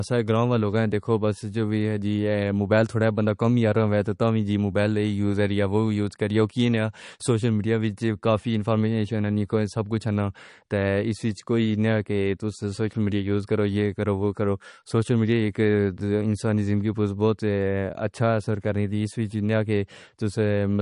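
From start to finish the speech carries plainly audible MP3 compression. Nothing remains above about 10.6 kHz, so s sounds lose their edge. Weak frequency detail flickers between frames, giving a watery, swirly texture. The damage likely comes from a low bitrate near 40 kbps.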